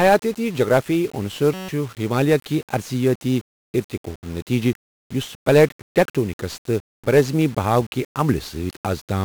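From start to finish the speech is fuzzy and crackly, with the treble buried under broadband hiss. That is heavy 1-bit DFPWM compression at 48 kbps: each sample keeps only one bit, nudging an adaptive level up or down, so coarse quantisation noise coats everything.

From 1.54 to 1.69 s the speech stops and a steady buzz at 188 Hz takes its place. This is a system hang loop. The system froze while the audio hardware kept replaying one 5.33 ms slice, which fits a 256-sample buffer, and roughly 150 ms of audio is lost.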